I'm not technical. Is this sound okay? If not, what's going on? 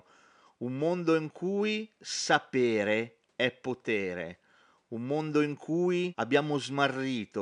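Yes, it's fine: there's just a faint bit of background noise from the room, far quieter than the speech, and nothing has gone wrong with the recording or playback.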